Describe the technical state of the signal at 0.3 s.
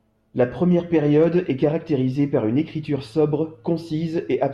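At 0.3 s the speech signal is intact, with no fault audible at that moment.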